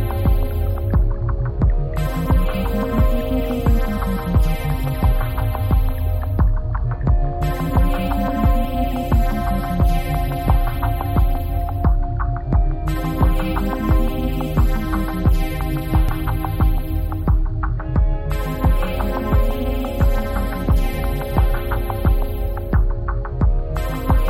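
At 16.09 and 17.10 s there's a small jump ahead, likely a dropped buffer (overrun), skipping roughly 20 ms and then just a few ms.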